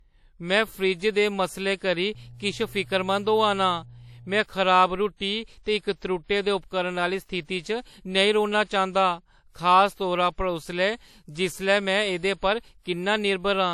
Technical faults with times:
0.00-13.73 low-bitrate audio saved at a high bitrate
2.15-4.40 mains hum

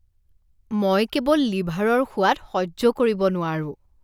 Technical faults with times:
none

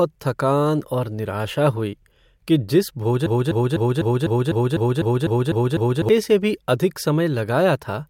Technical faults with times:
3.26-6.09 broken-record loop

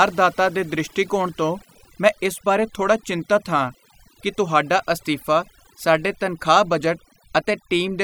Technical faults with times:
0.00-8.04 overdone noise removal

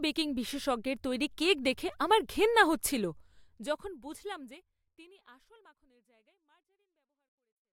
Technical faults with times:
none

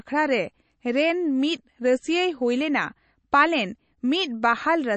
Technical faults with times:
0.00-4.96 MP3 compression

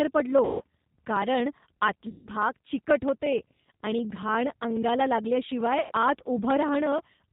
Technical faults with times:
0.00-7.32 G.729 codec
0.45-0.62 VoIP packet loss concealed by the speech codec
2.09-2.27 VoIP packet loss concealed by the speech codec
5.81-5.92 VoIP packet loss concealed by the speech codec

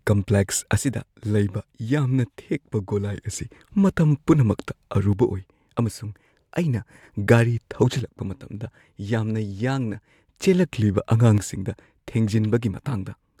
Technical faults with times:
0.77-3.17 one channel drops out
5.13-7.03 one channel drops out
7.99-10.39 one channel drops out
11.38-13.40 one channel drops out

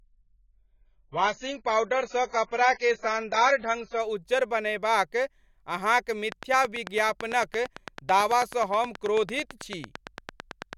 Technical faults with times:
0.00-4.00 adaptive stream starting at a low bitrate
6.32-10.74 train of clicks

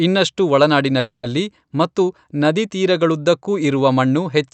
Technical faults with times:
0.99-1.25 call audio freeze

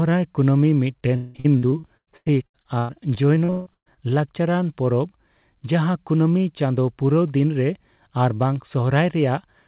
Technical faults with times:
1.16-3.99 repeated packet loss (robotic sound)

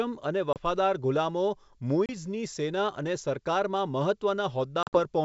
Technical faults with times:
0.53-0.57 packet loss on an ADPCM call
2.06-2.12 packet loss on an ADPCM call
4.83-4.99 packet loss on an ADPCM call

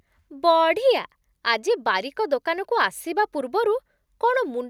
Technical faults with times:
none

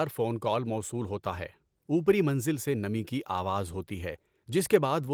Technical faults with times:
none

